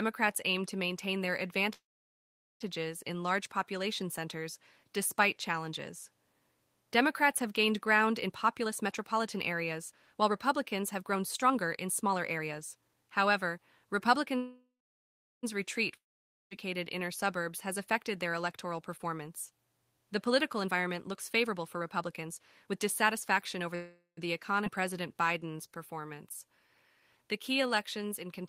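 Call audio freeze, 1.73 to 2.62 s: the sound likely stalls because packets were delayed and the jitter buffer ran dry. A short fading buzz gives way to about 0.79 s of silence, then the audio resumes exactly where it stopped, adding 0.87 s of delay with nothing lost.

Jitter buffer speed-up, 8.27 to 14.34 s: with too much audio queued, the receiver trims pitch periods repeatedly, running the speech at 114% speed without changing pitch. Roughly a second is cut, and the speech sounds hurried.

A second call audio freeze, 14.37 to 15.45 s, likely comes from another delivery stall. The fading fill leads to about 0.74 s of silence, and the speech continues intact 1.06 s late.

Long network dropout, 15.97 to 16.53 s: no packets arrive, likely from a network outage. A brief decaying buzz gives way to about 0.51 s of silence, and the speech returns with 0.54 s permanently gone.

Jitter buffer speed-up, 17.67 to 23.74 s: the receiver again removes pitch-period fragments to shrink the excess backlog. 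The speech runs at 111% speed, shedding around 0.7 s, and sounds rushed at unchanged pitch.

Call audio freeze, 23.75 to 24.19 s: this shorter stall is likely a brief packet delay. It gives 0.42 s of fill, only about 0.1 s of it silent, before the speech resumes unbroken.

Skip ahead, 24.65 to 24.68 s: a stretch was discarded while later audio waited. Playback jumps forward almost seamlessly, dropping about 0.3 s and joining the two sides nearly directly.

Jitter buffer slow-down, 24.80 to 28.25 s: the receiver repeats single pitch periods to rebuild its reserve. The speech slows to 91% speed, gaining 307 ms, with sounds drawn out at the same pitch.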